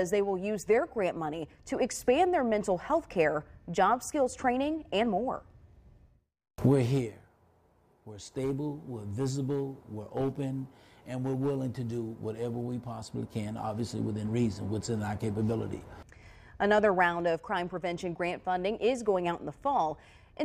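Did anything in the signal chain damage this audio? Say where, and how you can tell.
No, nothing along the chain seems to have left a mark on this one; the sound comes through steady and intact, with no stage showing any sign of trouble.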